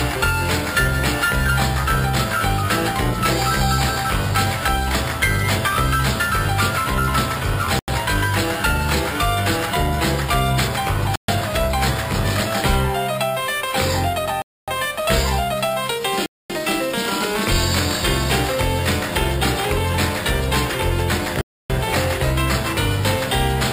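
The audio drops to dead silence at 7.79, 11.16, 14.42, 16.26 and 21.41 s, gaps ranging from 90 to 287 ms, then resumes. Likely Bluetooth stalls, with the headphone buffer running dry while packets were resent.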